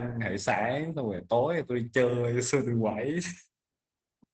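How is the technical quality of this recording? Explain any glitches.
The quality is held back by one fault, audible throughout. Opus voice compression runs the whole clip. The band stops near 8 kHz, fitting SILK wideband mode at a low rate, around 12 kbps. The coarse excitation coding makes the speech muffled, hoarse and slightly robotic.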